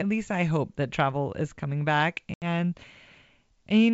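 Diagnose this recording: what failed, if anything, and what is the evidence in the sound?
Packet loss on the ADPCM call, a network-stage fault: just after "travel is coming back", an 80 ms hole from 2.34 to 2.44 s, which fits about four dropped 20 ms packets. On a spectrogram it appears as a hard-edged, fully blank vertical gap across the G.722 band. Afterward, the decoder's predictor and step size are out of step with the sender's, so the waveform resumes with brief, slight distortion before it resynchronises.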